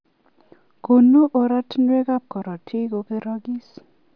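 Speech, with no audible faults.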